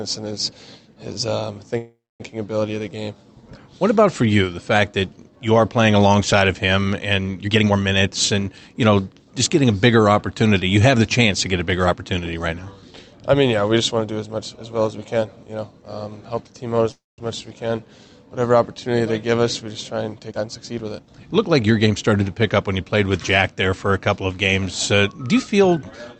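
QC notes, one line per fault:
1.77–2.22 s, call audio freeze: packets were likely held up in transit until the jitter buffer ran dry, so the receiver stretched the last sound into a fading buzz for 424 ms, about 230 ms of it silent, then resumed where it stopped with nothing lost.
7.43–9.23 s, jitter buffer speed-up: the buffer had built up excess audio and the receiver trimmed it by cutting many short pitch-period pieces, around 0.4 s in total. The sound runs at 123% speed at unchanged pitch and comes across as hurried.
16.92–17.20 s, call audio freeze: the same kind of packet stall likely emptied the buffer again. The last sound carries on as a fading buzz, then silence, filling 263 ms, about 190 ms of it silent, before the audio picks up without any loss.
20.30–21.67 s, jitter buffer speed-up: after another backlog, the receiver again dropped repeated pitch-period slices, roughly 0.3 s worth, to reduce delay. 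Playback rises to 119% speed with the pitch held, giving a rushed stretch.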